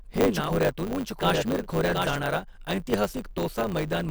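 Block size mismatch (truncated) runs throughout: each block's tail is discarded, producing a 100 Hz buzz and speech running about 1.09 times fast at near-normal pitch. A doubled audio track is already under way at 0 s and stops abruptly at 2.17 s, right after "हे नाव". A dry, full-band copy trails roughly 0.7 s behind, a few dB quieter, likely from a second, slower capture path.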